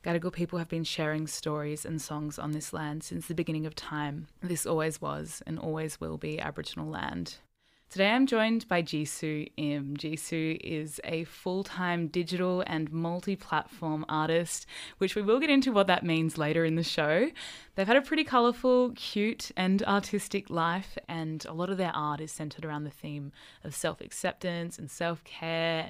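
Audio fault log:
No fault is heard anywhere in the speech. There is nothing to time, measure or trace to a cause.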